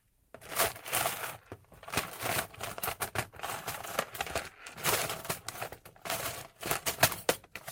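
No faults to report; nothing in the audio calls for attention at any point.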